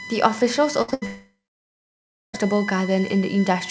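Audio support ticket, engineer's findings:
USB whine, entire clip: fixed-pitch tone on a 1 kHz base, strongest at 2 kHz, about 15 dB below the speech. The USB bus's 1 ms frame current is leaking into power or ground. A 1 kHz family, not 50/60 Hz, rules out mains hum.

Burst of packet loss, 0.82–0.90 s and 0.94–1.04 s: last sound held and fading out, then speech resumes with about 60 ms and 80 ms missing. The jitter buffer/decoder is stretching the last sound over lost packets. These are longer than a single concealed packet.

Short concealed packet loss, 0.90–0.94 s: brief smear of about 20 ms, squeezed between the two bursts. The decoder is extrapolating the last sound, then blending back into real audio. Too short to become a held buzz, which sets it apart from the bursts.

Long network dropout, 1.06–2.35 s: concealment fades out, leaving about 1.0 s of silence. Speech returns with roughly 1.28 s lost. 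Likely cause is the network link stopping delivery entirely. The long dead gap distinguishes it from the shorter bursts, as the G.722 path's 8 kHz band ceiling carries on either side.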